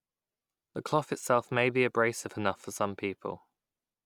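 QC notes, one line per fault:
Nothing stood out on listening to the speech.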